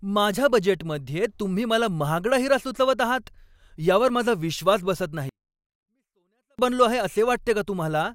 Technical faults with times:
5.29-6.59 24-bit alignment error (too quiet)

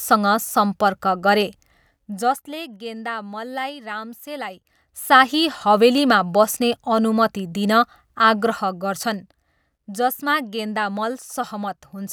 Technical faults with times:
1.67-2.65 zipper noise
4.46-5.34 zipper noise

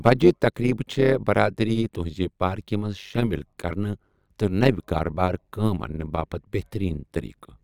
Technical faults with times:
0.00-7.63 overlap-add ripple

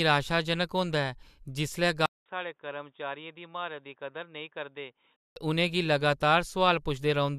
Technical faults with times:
2.06-5.36 input switched to a poorer device

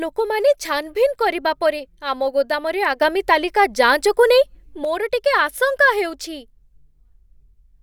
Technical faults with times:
3.01-4.85 sudden gain jump

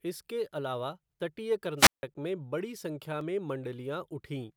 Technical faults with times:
1.77-2.03 wireless microphone squelch dropout
3.21 block of digital silence

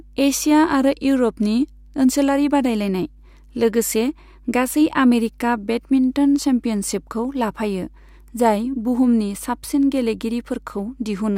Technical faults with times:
0.00-11.37 mains hum

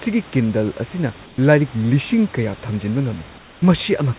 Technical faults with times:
1.26-1.38 comfort noise in place of the background
3.38-3.62 comfort noise in place of the background

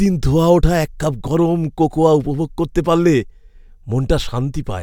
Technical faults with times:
none

